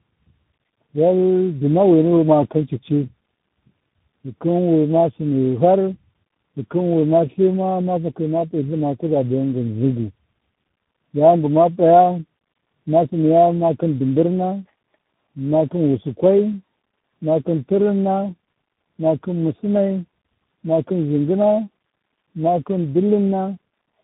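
Throughout the speech, the sound is rough, muffled and warbly, with nothing above 3.8 kHz. This is tandem speech coding: the speech passed through about three speech coders in a row, likely ending in CVSD, each re-coding the previous one's degraded output.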